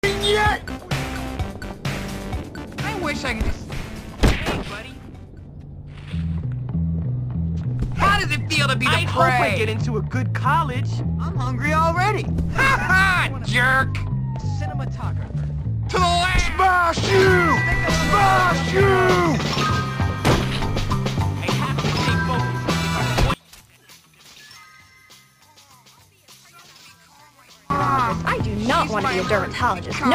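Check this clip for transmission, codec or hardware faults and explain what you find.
One fault is present. From 23.34 to 27.70 s the mono sum drops about 27 dB to a faint residue, likely one channel inverted cancelling shared content; waveform and spectrogram show a near-empty gap.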